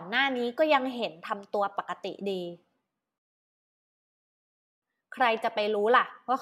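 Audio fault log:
3.18–4.82 s, rebuffering stall: the speech just stops dead and goes silent for about 1.6 seconds, then picks up exactly where it left off, with nothing skipped. That's the player running dry on downloaded audio and sitting there waiting for more to arrive before it carries on. Because it pauses rather than drops anything, you don't lose any of the content, but the clip ends up about 1.6 s longer than it should be.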